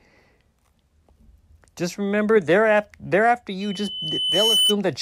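At 3.61 s a loudspeaker feedback squeal sets in: the microphone is picking up the loudspeaker it drives, and around 3 kHz the loop gain rises above one, so that frequency feeds on itself. Over roughly a second a thin, pure tone swells out of the speech into a piercing squeal, ending up a few decibels louder than the speech itself, before it stops at 4.77 s.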